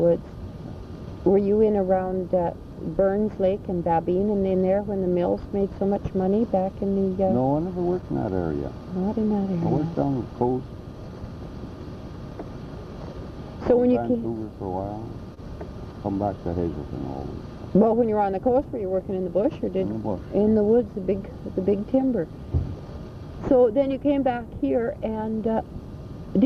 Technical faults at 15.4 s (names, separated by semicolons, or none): short stall from a late packet